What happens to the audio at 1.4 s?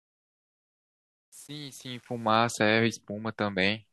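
At 1.4 s the speech sits inside truncation distortion on a fade, running from the start to about 2.37 s and worst until 2.23 s. The fade-in is quantised without dither, consistent with an 8-bit stage, so low levels collapse into square steps that sound gritty. Unlike clipping, the grit is worst where the sound is quietest and clears as the level rises.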